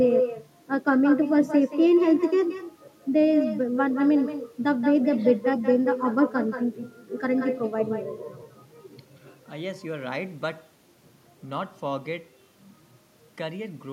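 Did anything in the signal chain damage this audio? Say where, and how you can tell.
Yes. In call processing, echo with no canceller: from the start, every phrase is followed roughly a fifth of a second later by a thinner copy about 10 dB quieter. A far-end loudspeaker is feeding its microphone with nothing subtracting it. A spectrogram shows each syllable's pattern faintly duplicated just to its right.

At the converter and driver boundary, clock slip clicks run from 0.14 s to the end: faint ticks about twenty per second, clearest on louder passages. Each is a single-sample step in the waveform and a thin vertical line on a spectrogram. The likely cause is two free-running clocks several hundred parts per million apart.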